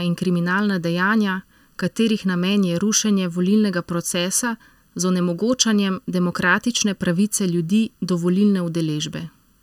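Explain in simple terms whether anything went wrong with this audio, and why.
Throughout the whole clip the speech sounds hollow and a little boxy, as if heard through a tube. That is channel delay (comb filtering): one channel arrives a bit under a millisecond late, and when the two are mixed together they cancel each other at evenly spaced pitches, starting around 700 Hz. Unlike simple muffling, the treble isn't just dulled; certain pitches are scooped out. Unlike room echo, there is no audible repeat or tail.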